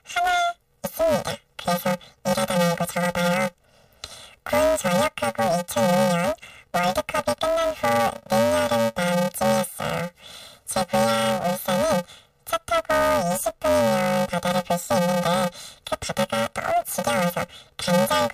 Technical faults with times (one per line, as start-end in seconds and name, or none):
0.00-18.33 planar audio read as interleaved